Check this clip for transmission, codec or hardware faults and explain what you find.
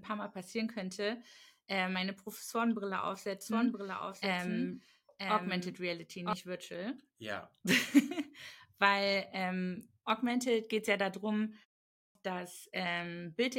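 Two faults are audible in this speech recording.

From 3.41 to 6.33 s there is a doubled audio track: a second copy runs about a second behind, roughly 5 dB quieter, likely from a delayed capture path.

At 11.9 s, after "geht es ja darum" and a 0.33 s pause, a clipped start after a pause swallows 251 ms as the output device wakes, so the speech begins abruptly.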